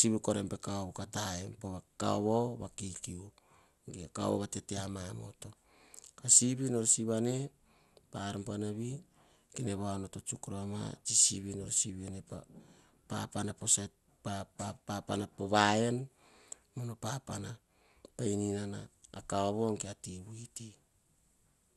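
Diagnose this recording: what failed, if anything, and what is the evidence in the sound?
Codec stage: throughout the speech, nothing reaches above 12.2 kHz and the remaining highs gurgle with a granular roughness, likely MP2 compression at a low rate near 80 kbps. Unlike a plain low-pass filter, upper sub-bands flicker on and off and sound coarsely quantised.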